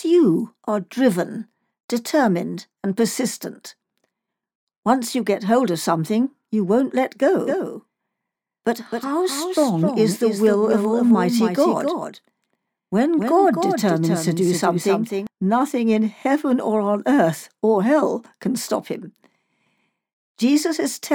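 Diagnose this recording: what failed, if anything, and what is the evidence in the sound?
A second, slower capture path is likely mixed in. The result is a doubled audio track from 7.47 to 15.27 s: a dry copy roughly 0.3 s late, about 5 dB down, cutting in and out abruptly.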